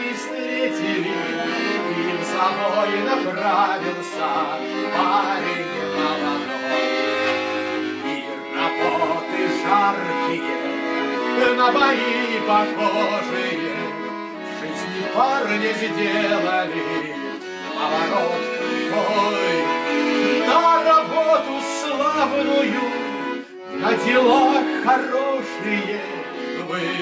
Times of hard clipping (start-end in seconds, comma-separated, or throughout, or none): none